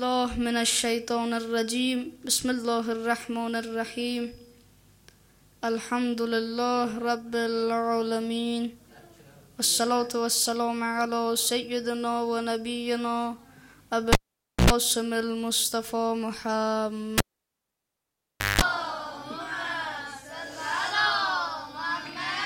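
A cable pulled and plugged in, twice: at 14.13–14.70 s and 17.18–18.61 s the audio pops, drops to near-silence, then buzzes at 60 Hz and 50 Hz before popping back. That mains buzz sets it apart from a plain dropout.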